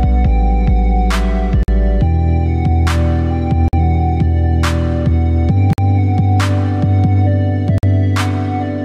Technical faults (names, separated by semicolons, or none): gap between chunks